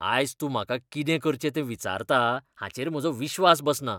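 From 2.37 s to 3.50 s the speech suddenly runs about 5.4% fast and rises roughly 91 cents, nearly a semitone, then drops back to normal. This is a drift correction step, likely from clock-matching software changing the playback rate in one jump to manage its buffer. Unlike wow or a slow drift, the shift starts and ends abruptly and holds steady in between. Speed and pitch move together, which separates it from a pitch-only shift.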